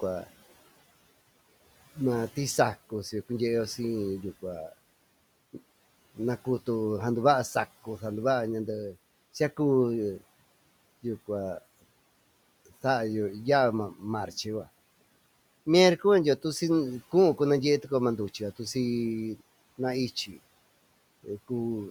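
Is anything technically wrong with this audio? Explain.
Yes. At 20.26 to 20.38 s, speech cut by the noise suppressor: the suppressor mistook quiet speech for noise and pulled it down by up to about 11 dB, leaving roughly a tenth of a second sounding swallowed and faint. Room noise sits about 24 dB below the speech.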